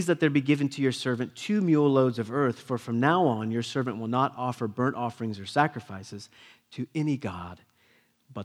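No technical faults can be heard anywhere in the recording. Nothing in the speech points to a problem along the recording or playback chain.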